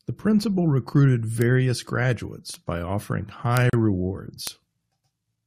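Sharp bit error spikes land at 1.42, 2.54 and 3.57 s: single ticks, broadband and unrelated to the speech. A flipped bit throws one sample (the first spans a short run of three) far off by a power of two before it snaps back. Right after, at 3.70 to 3.73 s, there's a 35 ms gap at a join of encoded pieces, where separately encoded chunks were butted together untrimmed, leaving encoder delay and frame padding as a brief dropout with smeared edges before the speech resumes. One more spike ticks at 4.47 s.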